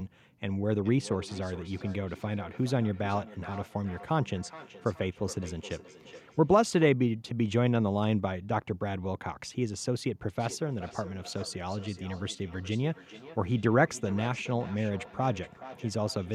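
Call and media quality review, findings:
Speech returns as thin, ringing repeats about 0.4 s apart, roughly 17 dB under the talker, 0.75 to 6.97 s. Feedback echo between two devices: a second device in the room replays this microphone's signal back into it, outside the local echo canceller's reach.

Same feedback echo between two devices, 10.39 s to end of clip: repeats about 0.4 s apart, up to about 17 dB below speech. The loop through the other device's speaker is still open; local cancellation cannot remove it.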